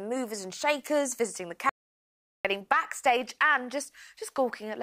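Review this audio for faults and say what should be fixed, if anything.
Audio dropout to silence from 1.69 s to 2.45 s: the sound cuts off mid-flow and returns after about 0.76 s, and the gap between is silence with no room tone or noise floor at all. That points to the input signal vanishing while the recorder kept writing silence, most likely from a momentary device disconnect, a failed link or an accidental mute. Whatever happened during those 755 ms is lost and cannot be recovered from this file. To prevent it, secure cables and connections, disable auto-mute or power-saving on the input device, and monitor the input live so interruptions are caught and the take repeated.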